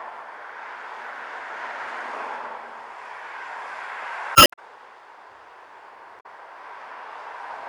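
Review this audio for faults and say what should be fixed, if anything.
There's damaged data in the compressed stream at 4.33 to 4.59 s and again at 6.17 to 6.26 s. Corrupted bytes there make the decoder misread frames and lose sync until it finds the next header, leaving short garbled bursts. Re-fetch or re-encode from an intact source, and verify checksums on transfer.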